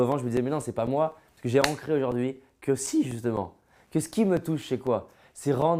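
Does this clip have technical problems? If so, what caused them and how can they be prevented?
Yes, there are periodic USB or driver dropouts from 0.12 to 5.62 s: a tick every 0.25 s, each a few milliseconds of silence while something stalls the bus. To prevent it, find and stop the background task that polls on that interval, or give the audio interface its own USB controller.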